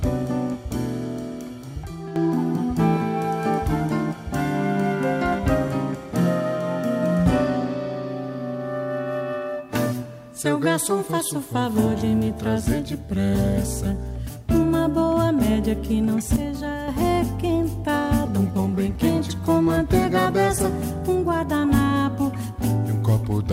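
The audio has two sudden gain jumps. From 1.84 to 2.16 s the level drops by about 10 dB, and from 16.36 to 16.88 s it drops by about 6 dB. In both spans the sound and the background noise fall together and recover at once, with no fade in or out. The likely cause is a digital gain change applied between adjacent samples without a ramp, such as a level setting or bit shift switched in and then back out.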